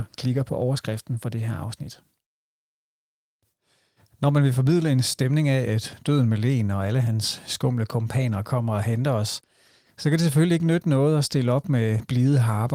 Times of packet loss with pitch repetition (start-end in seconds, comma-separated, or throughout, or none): none